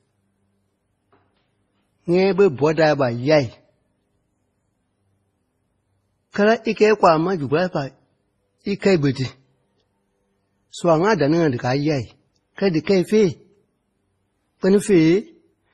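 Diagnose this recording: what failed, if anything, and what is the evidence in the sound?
The codec stage shows transcoding between lossy codecs throughout the speech. The artefacts of the different codecs are heard together, and nothing remains above 12 kHz. On a spectrogram this appears as a hard ceiling with blotchy, smeared detail below it. The likely cause is a low-rate MP3 encode, around 24 kbit/s, followed by Opus re-encoding that spent bits reproducing the earlier damage.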